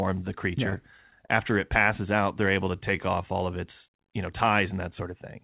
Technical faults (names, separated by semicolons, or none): repeated stalls (stutter); jitter buffer slow-down